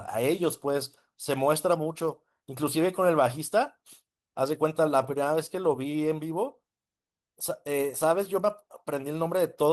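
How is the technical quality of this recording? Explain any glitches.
No audible glitches or faults.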